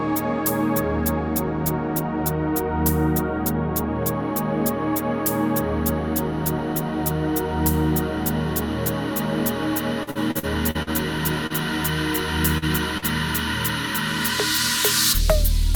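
From 10.03 to 10.90 s, packets were lost or arrived late again and again, and the receiver patched each hole by extending the preceding sound. This repeated packet loss, with holes up to about 42 ms filling roughly a quarter of the stretch, makes the audio choppy and robotic.

Later, short concealed packet loss hits three single moments, at 11.47, 12.58 and 12.98 s. Each time about 40 ms never reached the decoder in time and was filled by continuing the previous sound before blending back, heard as a brief smear or wobble.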